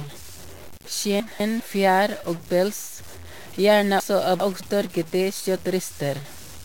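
The whole speech clip carries distortion, with hiss filling the pauses, which sounds like a stuck bit, likely a data line or converter bit frozen at one value. At 1.2 to 1.6 s, right before "fjær og pels", you get chunks out of order: one 200 ms piece plays a chunk late, so it sounds jumbled. At 4.0 to 4.6 s it happens again, with a 200 ms chunk landing two chunks late.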